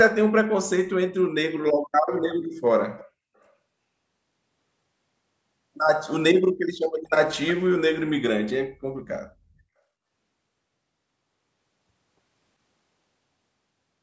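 Faint, delayed scraps of the speech surface at 2.28 to 2.35 s, 2.99 to 3.03 s and 3.40 to 3.52 s, each trailing the original by about 364 ms and fading from roughly 20 dB below the speech to around 40 dB below. This is echo leak, likely caused by a far end playing the call over a loudspeaker whose echo canceller failed to fully remove what its microphone picked up, so brief remnants were sent back.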